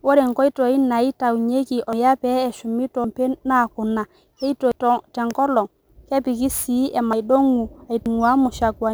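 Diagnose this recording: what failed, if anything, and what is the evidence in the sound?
The converter stage suffers from sample clock jitter. A fine hiss and roughness ride on the speech throughout, growing on loud and sibilant passages and disappearing in pauses. Timing error of a few microseconds turns steep waveform slopes into noise roughly 35 dB below the signal.

At the codec or storage stage, compressed frames were skipped at 1.93, 3.04, 4.72, 7.13 and 8.06 s. Speech jumps forward by roughly 200, 300, 200, 500 and 100 ms. The jumps fit whole frames of 92.9 ms being dropped.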